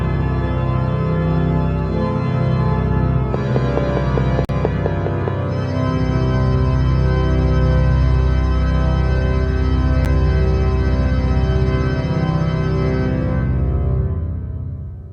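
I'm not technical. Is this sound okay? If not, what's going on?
No. From 3.34 to 5.29 s, something is likely feeding electrical pulses into the audio, such as interference from nearby equipment or a faulty connection or power supply. This train of clicks comes as about ten evenly spaced ticks, nearly five per second, sitting on top of the sound.

Twice the playback software likely failed to deliver audio in time, and a chunk was replaced with nothing. This block of digital silence is heard as a sudden 43 ms hole from 4.45 to 4.49 s, which fits a 2048-sample buffer, and as a brief tick at 10.05 s.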